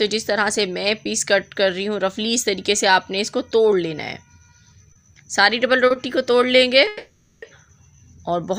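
A short stall from a late packet occurs at 4.92 to 4.98 s and again at 5.87 to 5.93 s. Each time a packet arrived late, the jitter buffer emptied, and the receiver held the last sound for about 30 ms before resuming at the same point. The sound briefly drags with a faint buzz, but nothing is lost.

A call audio freeze runs from 6.87 to 7.45 s. The last sound is carried on as a fading buzz for about 550 ms without dropping to silence. The audio then picks up where it stopped, so a gap has been inserted but nothing is missing. The likely cause is packets held up in transit, leaving the jitter buffer empty.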